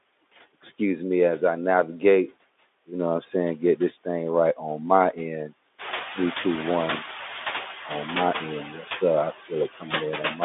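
Speech, with noise suppressor artifacts running the whole way through. The suppressor is pulling steady background down by about 13 dB frame by frame, so the noise dips in the gaps and creeps back up under the talking. Around 6 s the room noise jumps by roughly 14 dB, and from 5.78 to 7.05 s you can hear the noise suppressor catching up. Its noise estimate hasn't caught the new level yet, so for about 1.27 s the louder background comes through with only about 6 dB of cut before it settles back down. That leaves the room noise sitting about 11 dB under the speech. The line itself has that narrow 250 Hz to 3.6 kHz telephone band of a Speex link.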